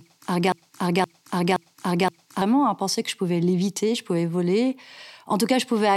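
From 0.52 s to 2.42 s the speech falls into a broken-record loop: one 0.52 s fragment plays four times back to back as exact copies, and normal audio resumes at "à penser que je". Whatever should have filled those seconds is missing. The likely cause is a stalled player or stream resending its last held fragment. On a waveform or spectrogram, an identical block repeats at a 0.52 s period, with a hard seam at each restart.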